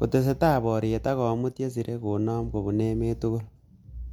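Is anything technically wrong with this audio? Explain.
No, the speech signal shows no technical faults anywhere in the clip.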